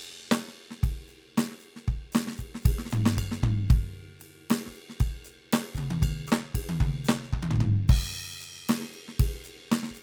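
From start to finish, the music carries overlap-add ripple. The audio was split into windowed frames and rejoined with an overlap that does not add up to a steady gain. So the level swells and dips once per frame, by about 6 dB. The frames recur around a hundred times a second. That sets the ripple rate. It is heard as a fast, buzzy flutter. The result is a rough, robotic tremolo laid over every sound.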